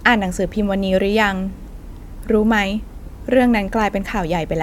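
A short speech recording with no audible technical faults anywhere in the signal.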